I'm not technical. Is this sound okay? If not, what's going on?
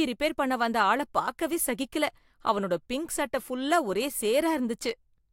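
Yes, this sound is fine; nothing wrong can be heard.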